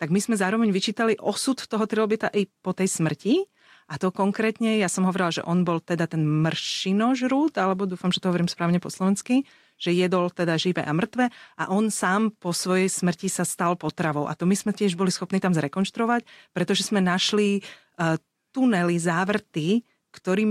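Nothing goes wrong anywhere in this speech recording, so there's no technical fault to point to at any moment.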